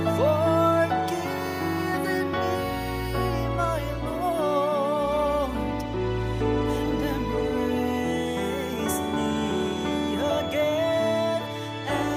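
From 8.05 s to the end, a feedback whistle at 3.4 kHz sits well below the sound, likely a loudspeaker-microphone loop near instability; spectrogram shows one thin horizontal line.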